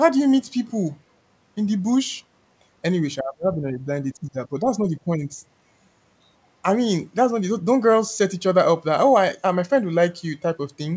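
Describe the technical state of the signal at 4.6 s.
Speech suppressed in double talk runs from 4.21 to 5.45 s, so 4.6 s falls inside it. The likely cause is an echo canceller that could not tell the near talker apart from loudspeaker echo while both ends spoke at once, and so attenuated everything it heard. The talker's level sinks by up to about 10 dB, with roughly a second of the span pulled down.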